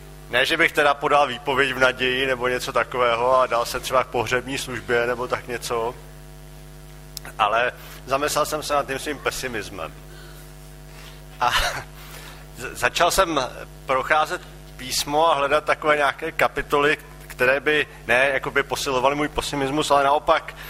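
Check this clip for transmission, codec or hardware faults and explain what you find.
Nothing audible points to a transmission, codec or hardware fault anywhere in the clip.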